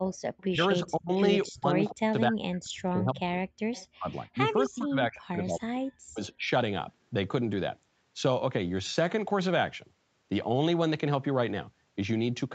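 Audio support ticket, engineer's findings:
Echo leak, likely far-end echo canceller not fully cancelling its loudspeaker pickup. Residual returned delayed about 264 ms. Faint delayed copy of the voice in brief scraps at 0.13–0.18 s, 0.37–0.44 s (about 30 dB below the talker) and 3.73–3.87 s (louder, about 25 dB down).

Speech suppressed in double talk, likely echo canceller misreading overlapping talk as echo and ducking everything. Near-end voice gated down by roughly 35 to 40 dB in pieces: 0.51–1.2 s (about half a second lost), 1.47–3.37 s and 3.97–5.82 s (about a second and a half each), 6.07–6.46 s (a few tenths). Dips and cutouts while both sides speak.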